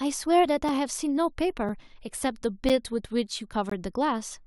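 Gaps between stream segments break up this speech clip at 0.69, 1.69 and 2.69 s and from 3.70 to 3.72 s, one per second. Each is a brief hard-edged dropout to silence: about 3 ms for the first two, 8 ms for the third and 20 ms for the last. The timestamps of consecutive 1-second segments don't line up, so the player pads the mismatch with silence. No audio is lost; the pauses are inserted.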